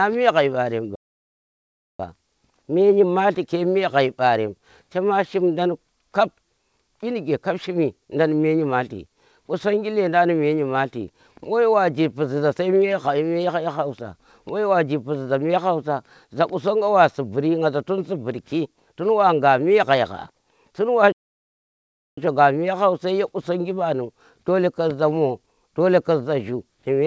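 Speech, heard through a call path with nothing above 8 kHz, which fits a G.722 wideband codec. The audio cuts out twice in mid-flow, from 0.95 s to 2.0 s and again from 21.12 s to 22.18 s. Each silence lasts about 1.04 to 1.05 s before the sound resumes. These are playback stalls, likely the player running out of buffered data or its output thread being blocked until it recovered.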